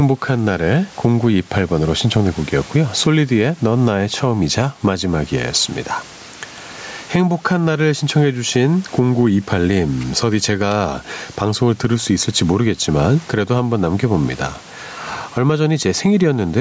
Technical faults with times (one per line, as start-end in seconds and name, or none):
0.00-16.60 gain pumping